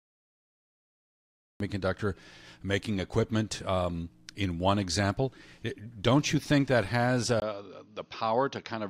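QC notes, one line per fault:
0.00–1.60 s, cut-off start. The clip opens in digital silence. At 1.60 s the speech begins abruptly, partway through a sound. There is no natural onset or fade-in. The recording evidently started late, so the first part of that sound was never captured. What remains jumps straight from zero to full level. The ear hears an unnatural hard edge instead of a word building up.
7.40 s to end, input switched to a poorer device. At 7.40 s there is a gap of about 20 ms. After it the speech turns duller and narrower. Nothing reaches above 6.6 kHz now, so the upper detail and air are gone. The level falls by roughly 5 dB. A new background noise floor appears, around 50 dB under the speech. This sudden change in bandwidth, level and noise most likely comes from the input moving to a lesser microphone or headset path.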